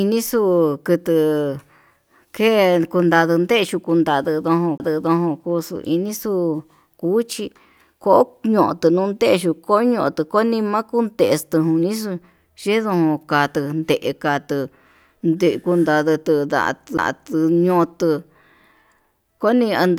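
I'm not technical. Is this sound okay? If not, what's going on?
No, there are two CD skips in this speech. The first is at about 4.78 to 4.80 s, the second at 16.97 s. At each one the player goes silent for a split second, just a tiny tick (the first a touch longer than the second), and the speech picks up from a slightly different spot. That happens when a knock or a flaw on the disc makes the laser jump to another turn of the disc's spiral.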